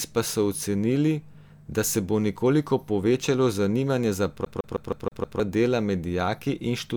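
From 4.45 to 5.40 s the speech is caught in a CD stuck on one turn: a 158 ms fragment repeats six times, each jump clipped by a brief mute, producing a rapid, even stutter.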